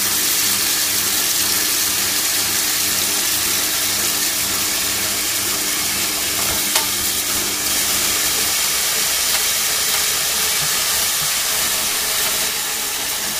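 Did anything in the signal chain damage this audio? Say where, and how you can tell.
Yes. From 7.70 s to 12.48 s a second, dry copy of the full-band sound runs about 0.7 s behind, roughly as loud as the original, switching on and off abruptly: a doubled audio track. It is likely a duplicate capture through a slower driver or buffer path, or an edit holding two offset copies.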